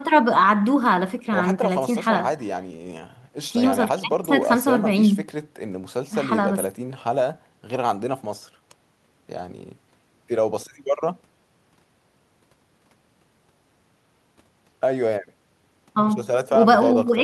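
The speech recording shows no technical faults at any point. Nothing in the signal chain can be heard going wrong at any moment in the audio.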